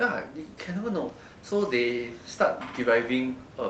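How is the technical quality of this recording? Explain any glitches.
No glitches can be heard in this recording. The speech comes through a WebRTC call path with the Opus codec, its high frequencies stopping at 8 kHz, and the room noise sits about 20 dB below the speech.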